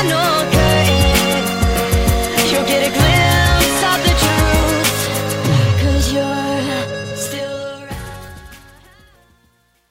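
From about 7 s the sound fades out toward the end at 9.91 s, and from 7.09 s that fade carries truncation distortion on a fade. The gain stage drops low-order bits without dither, which fits a word length of about 10 bits, so the shrinking waveform collapses into coarse square steps. The grit builds as the level falls, and from 8.28 s to 9.91 s the tail is at its grittiest.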